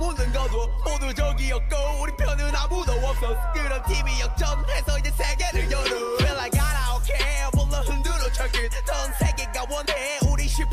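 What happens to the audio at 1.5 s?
Nothing goes wrong at 1.5 s; the audio plays through that moment intact, with no dropout, click, distortion or other audible fault.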